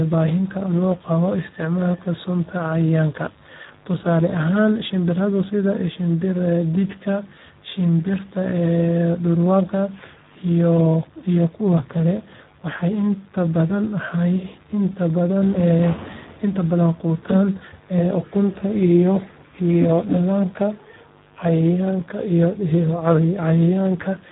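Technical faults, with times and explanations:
Throughout: Speex codec damage. The speech is heavily degraded, sounding hoarse and noisy, which points to a low-rate setting of about 8 kbps. At that rate this CELP coder has too few bits to describe the excitation, so the buzz driving each syllable is replaced by a coarse approximation. Nothing is present above 3.8 kHz, so the sound is narrowband and dull, without any upper fill.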